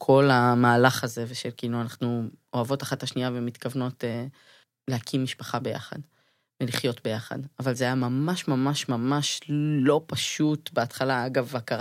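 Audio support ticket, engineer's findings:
One channel drops out at 0.99 s and stays out to end. Speech level steps down about 6 dB, instantaneous. Likely cause: lost stereo leg upstream of mono sum. Unlike a gain fault, the drop is exactly half-amplitude, with no fade or ramp.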